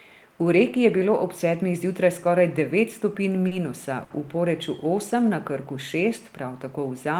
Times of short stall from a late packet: 3.47-3.53, 4.04-4.12

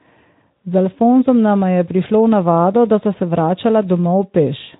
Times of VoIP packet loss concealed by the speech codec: 0.58

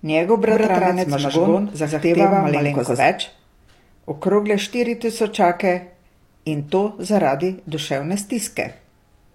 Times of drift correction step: none

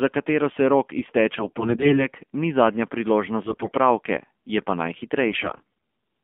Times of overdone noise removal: none

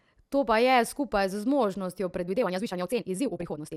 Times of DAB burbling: 3.35-3.55

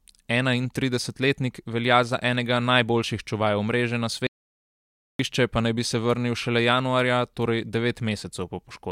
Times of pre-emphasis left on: none

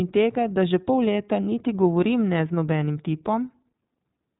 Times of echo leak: none

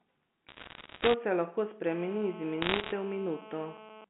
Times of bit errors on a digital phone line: 0.48-1.14, 2.62-2.92

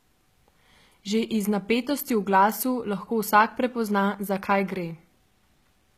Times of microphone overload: none

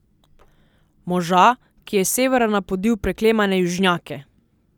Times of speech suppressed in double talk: none

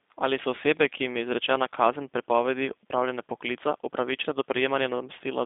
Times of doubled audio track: none

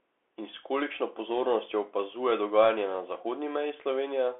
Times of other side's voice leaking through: none

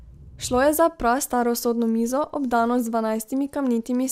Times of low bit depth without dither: none

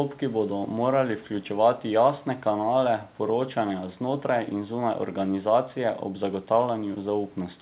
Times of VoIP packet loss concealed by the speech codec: none

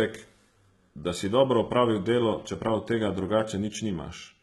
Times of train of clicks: none

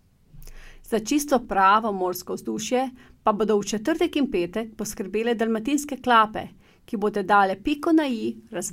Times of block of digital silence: 1.45

